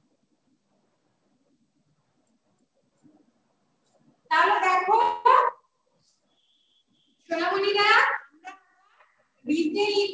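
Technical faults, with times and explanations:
5.02 to 5.27 s, call audio freeze: for about a quarter of a second the sound stops moving forward and the last bit of it is stretched into a fading buzzy tail, never quite dropping to silence. That's likely a hold-up in packet delivery that let the jitter buffer run dry, so the receiver papered over 231 ms with made-up audio. Nothing is lost; when packets resume, everything after plays 231 ms late. The G.722 path's 8 kHz ceiling colours that tail too.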